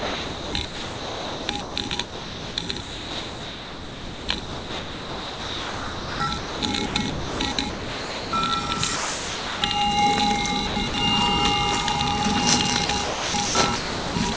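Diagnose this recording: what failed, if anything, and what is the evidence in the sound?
Call processing at the sender is the likely failure: the voice activity detector kept switching between sending and pausing, so the sound was chopped by the voice detector, with stretches swapped for comfort noise. From 0.00 to 8.33 s, about 6.7 s of the sound is replaced. It happens again at 10.67–10.94 s (150 ms) and from 12.86 s to the end at 14.37 s (about 0.85 s). The audio turns choppy.

The same detector stage likely also dropped a passage: it took real sound for background and stopped sending. From 8.96 to 9.62 s, 0.66 s is lost, and the receiver filled the gap with comfort noise. The sound gives way to steady, featureless noise and returns once the detector triggers again. Through the call path, nothing reaches above 8 kHz, which fits the G.722 wideband codec at 64 kbps.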